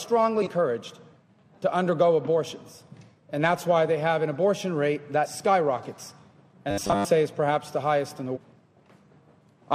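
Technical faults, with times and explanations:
0.42–0.48 s, 5.21–5.27 s and 8.32–8.38 s: damaged data in a compressed stream. Each event is a brief chirp or blip of about 55 to 65 ms. Corrupted bytes make the decoder misread a frame, lose sync and skip ahead to the next frame header it can find. Unlike buffer repetition, these are isolated, irregular glitches with no steady pitch.
6.71–7.07 s: robotic sound from repeated short buffers. For about a third of a second the sound becomes a rigid, metallic buzz at 100 Hz that still loosely follows the underlying contour, with most of the real audio in that span missing. This is likely the playback software repeating the last chunk of roughly 10 ms while new data arrives too slowly, and that repetition rate sets the fixed pitch. The sustained, pitched buzz distinguishes it from the short, unpitched chirps of corrupted frames.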